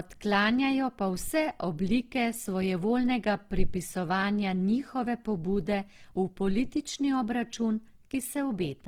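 From start to finish the speech sounds rough and grainy, with a fizzy texture up top. That's likely Opus compression in its music mode, short of bits in a way that fits 16 kbps: starved bands get filled with noise, so it's gritty rather than swirly.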